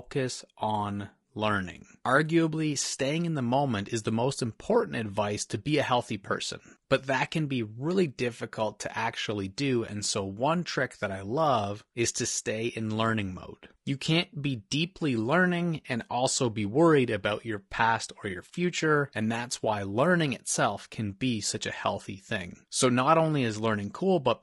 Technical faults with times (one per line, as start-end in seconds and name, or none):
0.00-24.42 low-delay AAC compression